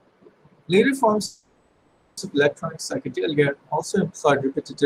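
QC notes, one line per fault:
1.25–2.19 s, call audio freeze: the speech stalls and the last sound is stretched into a fading buzz lasting about 0.92 s, with no true silence, before resuming on "of electronic psychedelia also" exactly where it left off. The likely cause is packets held up in transit draining the jitter buffer. Unlike packet loss, nothing is skipped. The gap is inserted, so everything after it arrives about 0.92 s late.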